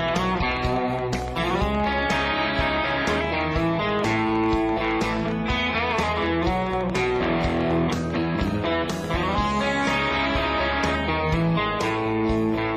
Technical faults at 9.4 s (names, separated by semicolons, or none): train of clicks